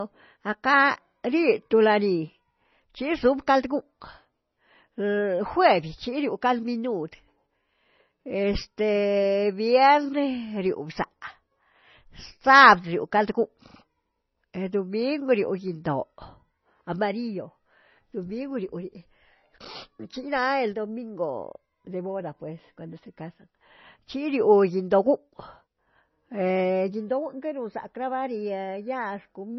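Across the whole recording the speech sounds dull and watery, with nothing above about 6 kHz and a swirling, metallic edge on sibilants. That heavy damage is likely MP3 compression at a very low bitrate, which fits roughly 24 kbps, cutting treble and dropping weak frequency lines.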